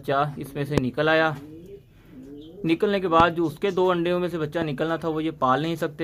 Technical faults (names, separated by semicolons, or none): loud pop